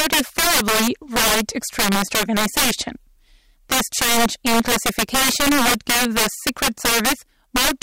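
Integer overflow runs through the whole speech clip. The signal was driven about 11 dB past full scale, and instead of being limited, every sample beyond the integer range wrapped around to the opposite sign. Roughly seven percent of samples are affected, concentrated on the louder syllables. Each wrapped peak jumps across the full range in a single step, producing harsh, violent cracks on the loudest passages that are far sharper and more abrasive than ordinary clipping distortion.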